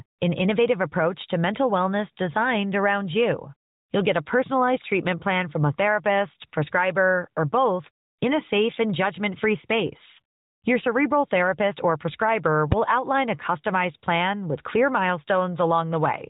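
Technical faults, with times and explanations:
12.72 s, invalid numbers at full scale: one sharp bang where infinite or invalid results were pinned to maximum value for about 5 ms, fitting a 256-sample block. The waveform shows a brief flat slab pinned at one extreme, and the spectrogram shows a thin, full-height vertical stripe.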